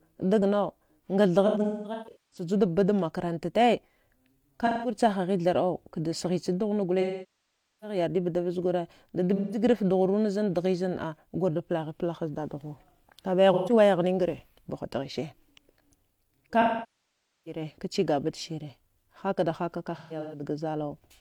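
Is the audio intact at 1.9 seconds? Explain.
No. At 1.9 seconds the speech sits inside AAC frame loss with concealment, from 1.46 to 2.47 s. About 640 ms of audio went missing in patches, the longest around a fifth of a second. The decoder papered over each gap from the last good spectrum. That leaves smeared, noisy, phasey stretches.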